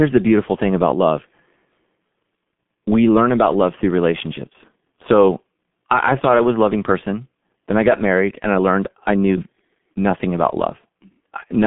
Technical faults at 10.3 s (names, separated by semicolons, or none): G.723.1 codec